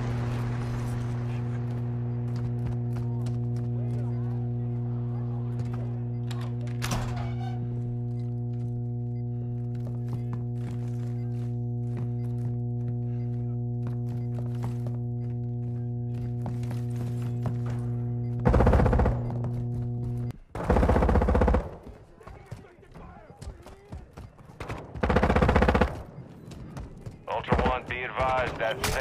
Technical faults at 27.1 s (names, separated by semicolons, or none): none